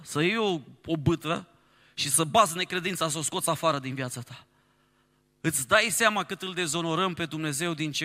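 No technical faults are audible anywhere in the speech recording.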